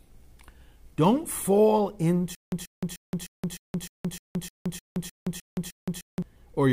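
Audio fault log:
2.35–6.22 s stutter with silent gaps: a 134 ms burst repeats 12 times with 171 ms of silence between, likely a stalled stream replaying its last fragment.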